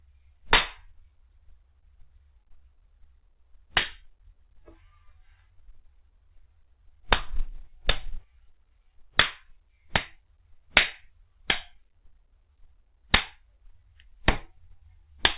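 Nothing goes wrong here at all, the sounds simply come across as they would over a G.711 mu-law call, with the top of the band stopping at 4 kHz as that path does.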